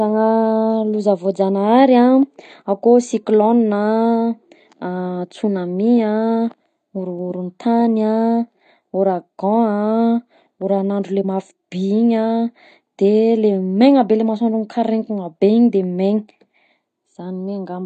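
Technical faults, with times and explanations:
Throughout: AAC compression. Nothing is present above 9 kHz, and coding damage is plainly audible across the speech, likely from AAC-LC encoding at a low bitrate that fits about 32 kbps. Unlike a plain low-pass filter, the band below the cut-off is also degraded.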